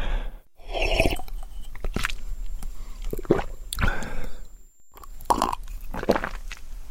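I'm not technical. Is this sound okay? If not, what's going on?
No. From 2.16 to 5.56 s there is a faint high whistle near 7.3 kHz. This is a switching supply whistle from a switching power supply running in an audible mode.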